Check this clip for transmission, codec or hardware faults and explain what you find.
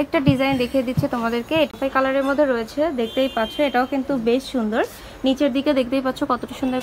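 One fault: a CD skip at 1.71 to 1.74 s. The audio cuts out for a brief mute of about 20 ms, heard as a short tick or gap, and when it returns it does not continue from where it left off but from a different point in the material. That discontinuity comes from the player's laser being knocked or thrown by a disc flaw onto another turn of the spiral track. The player mutes briefly while it relocks, then resumes reading wherever the laser landed.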